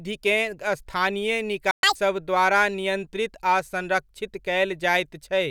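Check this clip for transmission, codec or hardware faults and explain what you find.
Two related faults are present, both in the same second of the speech.

A playback stall runs from 1.71 to 1.83 s: the speech cuts to silence for 120 ms mid-flow. This is likely the player running out of buffered data or its output thread being blocked, leaving the output empty until it resumed just before "द्वारा नियंत्रित आ संरक्षित".

Catch-up at higher speed follows immediately, from 1.83 to 1.95 s. To recover the lost time, the player resamples its backlog at 2.0 times normal speed, so the speech briefly sounds hurried and chipmunk-like, pitched up by roughly ten semitones, before dropping back to normal rate and pitch.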